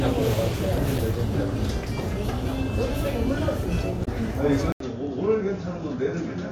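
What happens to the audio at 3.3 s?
Nothing goes wrong at 3.3 s; the everyday sound carries straight through that moment intact, with no dropout, click or other fault.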